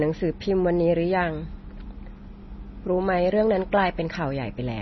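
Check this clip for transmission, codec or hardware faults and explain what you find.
One codec fault is present. MP3 compression runs throughout the clip, likely from an encoder starved of bits, which fits a rate near 24 kbps. Treble stops abruptly at about 5.9 kHz, and weak frequency lines flicker between frames, leaving the speech heavily watery and swirling.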